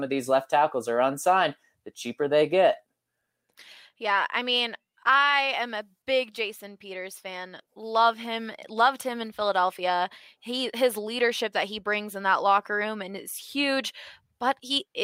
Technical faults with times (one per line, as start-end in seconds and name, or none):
none